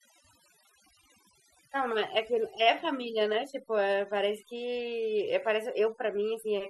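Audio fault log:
throughout: overdone noise removal. A noise reducer was pushed far too hard on a noisy recording, so any frequency band sitting close to its noise estimate gets cut deeply or switched off entirely, taking the softer parts of the voice along with the noise. Between phrases the background collapses to near silence broken by twinkling, chirpy specks.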